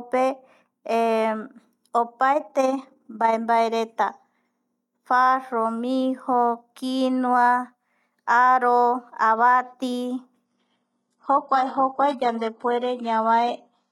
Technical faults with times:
2.32-3.37 overlap-add ripple
10.45-13.92 adaptive stream at a lower bitrate

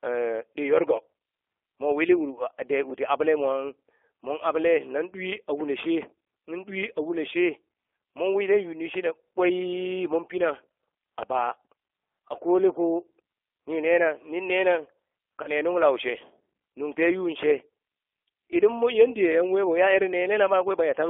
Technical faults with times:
0.00-21.10 G.729 codec
11.88 VoIP packet loss concealed by the speech codec
15.43-15.48 VoIP packet loss concealed by the speech codec

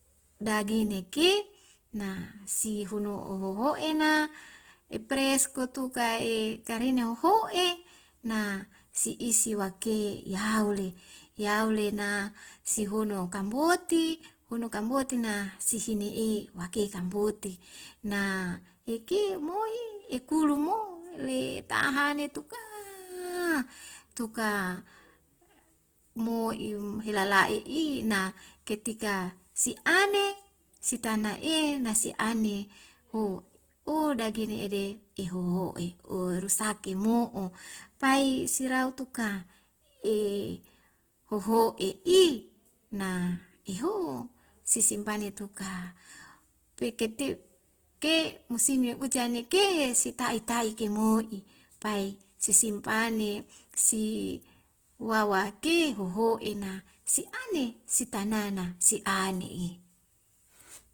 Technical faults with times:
0.00-60.94 Opus compression

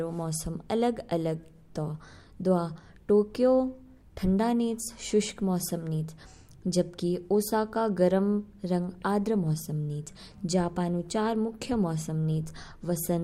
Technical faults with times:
none

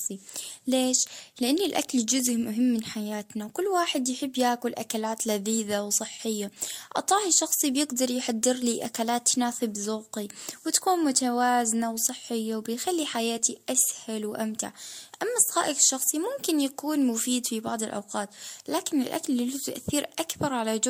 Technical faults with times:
0.00-20.90 transcoding between lossy codecs

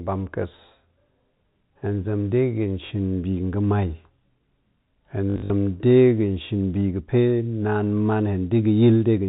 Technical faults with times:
2.86-2.90 packet loss with last packet repeated
5.30-5.50 packet loss with last packet repeated

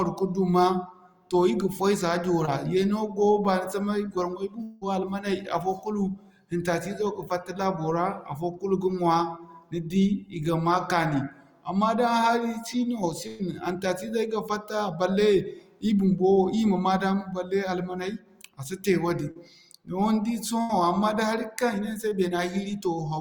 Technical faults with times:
2.45-2.49 short concealed packet loss
4.63-4.83 long network dropout
13.27-13.41 burst of packet loss
19.31-19.37 short concealed packet loss
20.61-20.71 burst of packet loss
22.09-22.13 short concealed packet loss

